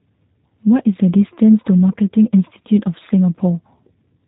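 Throughout, the speech passes through a G.729 codec, likely G.729A at 8 kbit/s, rebuilt from filter and pulse parameters, so it sounds audibly rough and synthetic, with nothing above 3.8 kHz.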